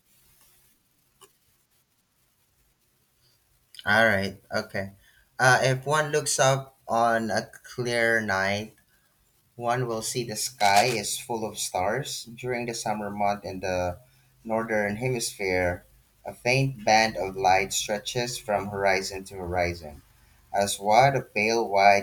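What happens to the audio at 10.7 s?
Right around there, from 10.60 to 10.97 s, there's a burst of cable scratch noise riding over the speech, dense and uneven, roughly 10 dB below it. That gritty rustle likely comes from a worn cable or connector being moved, its contact resistance jumping around rapidly.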